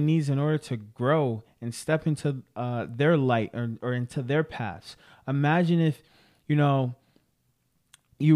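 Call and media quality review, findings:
No faults found in this call and media quality review.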